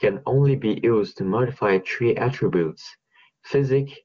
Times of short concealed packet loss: none

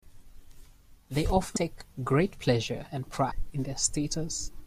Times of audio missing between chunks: 1.56, 3.31

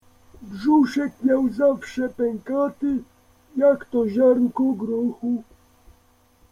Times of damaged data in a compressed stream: none

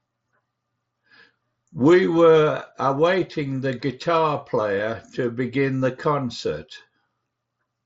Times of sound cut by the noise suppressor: none

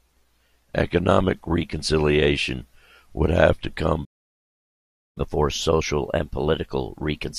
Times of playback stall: 4.04-5.17

